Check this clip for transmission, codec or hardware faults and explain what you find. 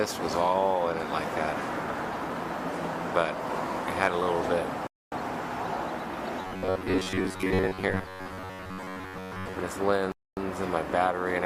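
Two kinds of fault are present: gaps between chunks, heard twice, and a stretch of robotic sound from repeated short buffers.

Gap between chunks, from 4.87 to 5.12 s and again from 10.12 to 10.37 s: the sound stops dead for a quarter of a second, then resumes with nothing missing. The holes recur on a 5-second rhythm, matching the chunk length. Each chunk is delivered whole, but 250 ms of silence is inserted at every join, from padding or late chunk start-up.

Robotic sound from repeated short buffers, from 6.42 to 9.59 s: the audio takes on a rigid, metallic buzz pitched at 93.8 Hz that loosely tracks the underlying sound but loses its natural movement. The likely cause is audio arriving too slowly, with the playback repeating a fragment of roughly 10.7 ms to fill the time. That period imposes the fixed buzz pitch, and most of the real audio in this stretch is skipped.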